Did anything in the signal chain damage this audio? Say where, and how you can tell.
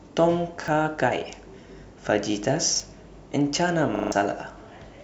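Yes. The speech stutters briefly at 0.64 s and 2.76 s, and again for longer from 3.96 to 4.12 s, each time with a hard join. That is a repeated buffer at the driver or buffer stage: a 40 ms block replayed once, then four times, while roughly 150 ms of new audio was lost.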